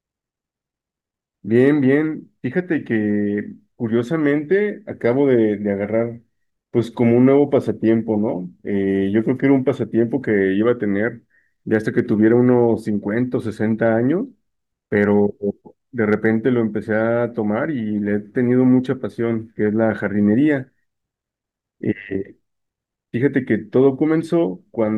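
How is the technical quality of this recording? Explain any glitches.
The speech has three brief patches of hard clipping, between 11.74 and 12.32 s, from 14.97 to 15.04 s, and from 16.13 to 16.27 s. Each sounds like a light crackle riding on the loudest peaks. The signal exceeds what a stage can pass by only about 1 dB, so peak tops are sheared flat, adding high harmonics.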